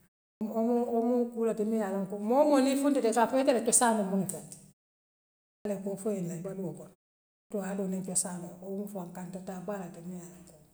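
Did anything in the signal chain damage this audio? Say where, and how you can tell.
Yes, at the playback end: a clipped start after a pause. At 0.3 s, 5.55 s (just before "loŋ koo foo ila") and 7.4 s (between "foo ila baluuo kono" and "haadoo niŋ cosaanoo"), about 0.1 s of onset is missing. The output device dozes during silence and wakes too late.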